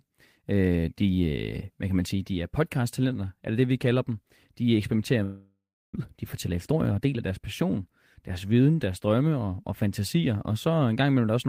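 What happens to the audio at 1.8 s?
Nothing goes wrong at 1.8 s: the speech there plays through intact, with no dropout, click, distortion or other fault.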